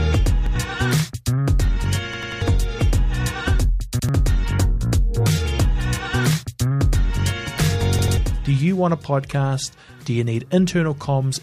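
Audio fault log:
0.46 s, 2.14 s, 3.99 s and 7.99 s, repeated buffer: the same block of about 93 ms sounds again with a hard join each time, repeated once, three times, once and twice respectively, which fits a 4096-sample buffer replayed while fresh audio failed to arrive. Unlike a dropout, no silence is left; unlike an echo, the copies are identical and undecayed, and roughly 100 to 300 ms of new audio is skipped.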